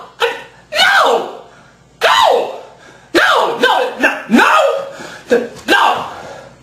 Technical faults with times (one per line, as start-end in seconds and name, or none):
0.00-6.63 gain pumping